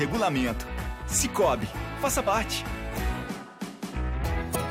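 At 2.26 s and again from 4.54 to 4.56 s, damaged data in the compressed stream makes the decoder misread corrupt frames and hunt for the next header, giving a brief chirp, squawk, click or short hole.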